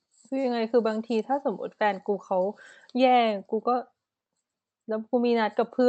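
Speech recording with no audible technical faults.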